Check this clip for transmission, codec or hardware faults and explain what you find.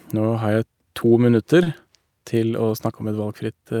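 One fault stands out: a short stall from a late packet at 1.63 to 1.68 s. The packet came late, the jitter buffer ran dry, and the receiver held the last speech sound for 30 ms, then resumed from the same point, shifting playback 30 ms later. The sound lingers with a slight buzz or dip. Unlike a dropout, nothing is skipped.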